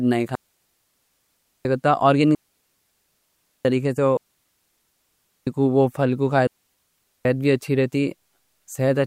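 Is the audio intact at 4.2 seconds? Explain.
No, 4.2 seconds falls right inside a digital wireless dropout that runs from about 4.17 to 5.47 s, so roughly 1.3 s of the speech is simply gone. The wireless link lost too much data, and instead of spitting out garbage the receiver muted itself with a very quick fade. What you hear is a clean hole of near silence with no crackle or noise burst on either side, and the speech comes back on "کو وہ پھل کو".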